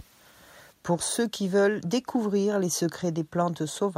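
No technical faults can be heard anywhere in this recording of speech. There is nothing to place on the timeline.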